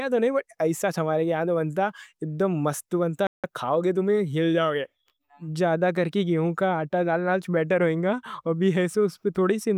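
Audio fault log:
3.27–3.44 s, playback stall: the speech cuts to silence for about 0.17 s, then resumes with "کھاؤ گے تم ہل". The gap falls mid-flow, not at a natural pause. The player likely ran short of data or was briefly blocked, so output stopped until it recovered.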